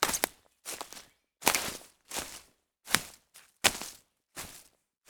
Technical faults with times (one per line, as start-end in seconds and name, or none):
none